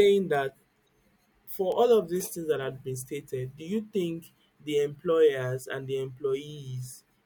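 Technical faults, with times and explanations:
0.35 s and 1.72 s, bit error spike: each is a single sharp tick, reaching about -23 dBFS, that has nothing to do with the speech around it. A flipped bit briefly throws the sample value off by a power of two, then the value returns to normal. The first lasts only one sample and the second two, so the tick is broadband and instantaneous. Unlike a dropout click, there is no gap or lost sound, and unlike clipping, it doesn't follow loud peaks.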